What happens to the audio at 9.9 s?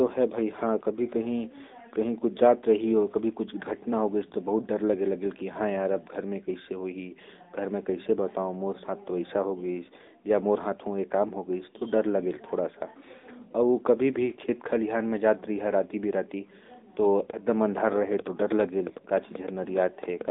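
At 9.9 s the speech is still passing through the AMR narrowband mobile codec, as it does for the whole clip. The voice is coded as a vocal-tract model excited by sparse pulses, at a rate that sounds like the 10.2 kbps mode. The result is a phone-line band of roughly 200 Hz to 3.7 kHz with nothing above 3.8 kHz, so the speech sounds muffled and boxy, with a plainly audible buzzy, synthetic edge.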